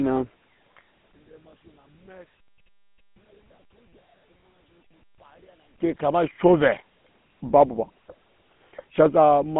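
The GSM full-rate codec runs throughout, coloring the speech from start to finish. The coder describes the vocal tract with a short filter and feeds it a sparse train of regular pulses, discarding most of the excitation detail, so vowels take on a gravelly, buzzing grain. The damage is plainly audible. Nothing reaches above 3.8 kHz, and the band sits roughly between 150 Hz and 3.4 kHz, which fits a 13 kbps narrowband phone channel.

One channel inverted best explains what happens between 1.12 and 5.79 s. The speech collapses by about 36 dB to a faint residue, then returns at full level. The likely cause is one stereo channel flipped in polarity during this stretch and then summed to mono. Because the centred speech is nearly identical on both sides, it cancels almost completely, leaving only the tiny difference between the channels.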